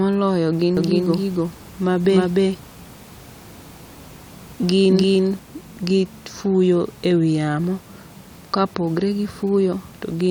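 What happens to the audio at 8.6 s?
Nothing goes wrong at 8.6 s; the speech carries on intact through that moment.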